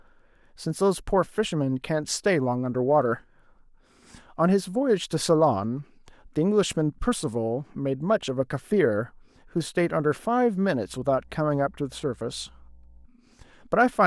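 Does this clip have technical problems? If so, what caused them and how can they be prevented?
Yes. Mains hum appears from 10.86 to 13.06 s as a steady 60 Hz tone with low harmonics, sitting about 30 dB below the speech. A ground loop or nearby transformer is feeding the power line frequency into the signal path. Prevent it with balanced cabling, a single grounding point, and keeping cables and microphones away from power supplies.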